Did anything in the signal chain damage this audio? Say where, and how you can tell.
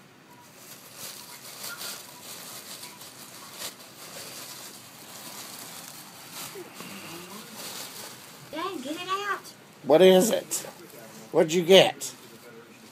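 Yes. Damaged data in a compressed stream made the codec lose frame sync, causing brief glitches at 3.70 s and 8.53 s while the decoder resynchronised.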